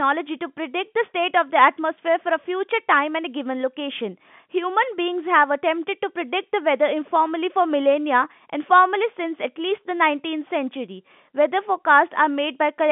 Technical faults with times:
none

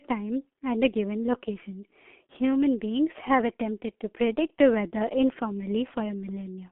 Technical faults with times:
0.00-6.71 G.723.1 codec

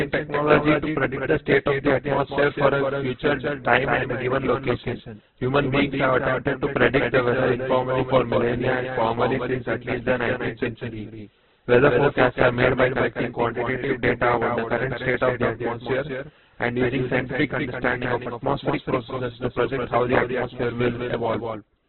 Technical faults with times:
0.00-21.88 doubled audio track
0.00-21.88 Opus compression

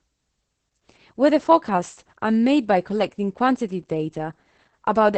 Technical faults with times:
0.00-5.17 Opus voice compression

